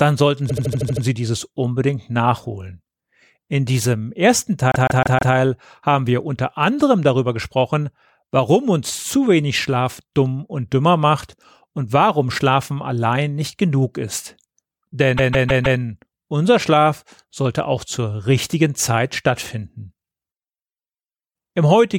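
Repeated frames in speech: short blocks of compressed audio were decoded again and again, so the sound stutters. At 0.49–1.03 s, just before "dieses unbedingt nachholen", a 78 ms block plays seven extra times. At 4.72–5.34 s, after "diesem ersten", and at 15.17–15.79 s, a 157 ms block plays four extra times.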